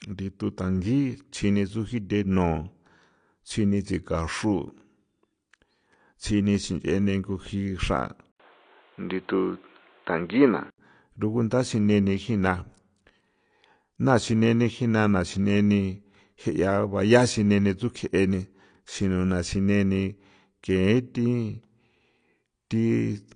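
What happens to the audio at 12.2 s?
At 12.2 s the speech is dull and band-limited, with nothing above about 9.8 kHz and a warbling, fizzy texture on sibilants and sustained sounds. This persists through the whole clip, so the moment is not an isolated event. The likely cause is AAC compression, where a low bit budget forces the encoder to drop high frequencies and coarsely quantise the rest. The damage is plainly audible and fits AAC-LC at around 32 kbps.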